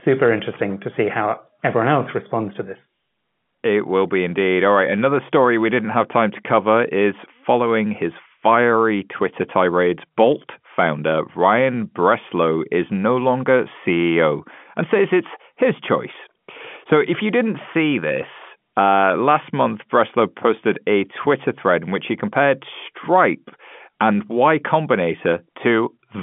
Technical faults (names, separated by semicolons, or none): none